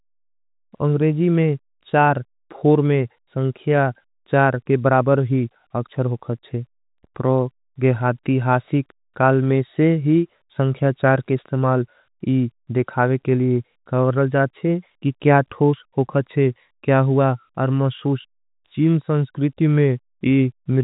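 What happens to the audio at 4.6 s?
Nothing goes wrong at 4.6 s: the speech continues intact through that moment, carried by G.711 telephone coding with its usual 4 kHz ceiling and only faint coding noise.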